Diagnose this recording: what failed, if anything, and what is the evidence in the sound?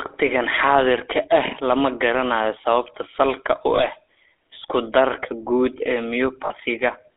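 Codec stage: the speech carries the buzzy, gravelly roughness of the GSM full-rate codec throughout, band-limited to 300 Hz to 3.6 kHz, consistent with 13 kbps pulse-excited coding.

Network stage: lost GSM frames at 3.76 to 3.84 s, after "salka u", and 6.46 to 6.51 s, after "guud ee", produce a brief metallic ring where the decoder repeats the last good frame.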